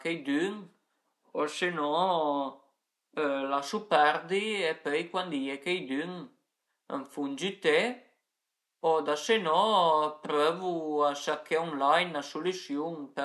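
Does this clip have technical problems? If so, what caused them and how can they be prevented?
No, there's nothing technically wrong to hear in this speech clip, so there's no cause to track down and nothing to prevent.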